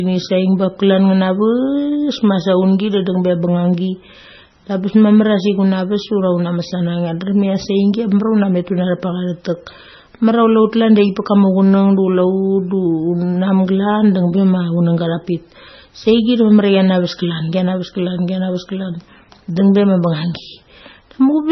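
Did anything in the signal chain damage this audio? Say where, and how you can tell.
Yes. MP3 compression damage runs through the whole speech clip, at the codec stage. Nothing reaches above 5.9 kHz, and the sound turns heavily watery and swirly as weak frequency components drop in and out between frames. That points to a likely MP3 encode at roughly 17 kbps.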